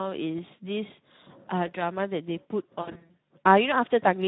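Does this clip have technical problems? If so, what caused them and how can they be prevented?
Yes. Speex codec damage runs through the whole speech clip and is plainly audible. Speech sounds hoarse and noisy because the CELP coder has too few bits to model the excitation, which fits a low setting around 11 kbps. A spectrogram shows smeared harmonics. The waveform looks grainy rather than cleanly periodic. Encoding at a higher Speex quality, or switching to a modern codec such as Opus, prevents it.

VoIP packet loss concealed by the speech codec appears from 2.82 to 3.15 s. About 180 ms of audio went missing across a 320 ms stretch, with the longest gap lasting 60 ms. Each time, the decoder extended its last pitch and filter and lowered the gain. The result is a buzzy tone or coloured noise that fades, and the sound stays weakened briefly after the packets resume. A waveform shows dips in level. 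A jitter buffer, forward error correction or a more reliable network connection prevents it.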